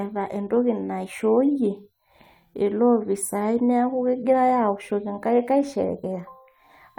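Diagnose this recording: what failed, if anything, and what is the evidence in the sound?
Nothing failed: no stage between the capture chain and playback leaves any audible trace on the recorded speech.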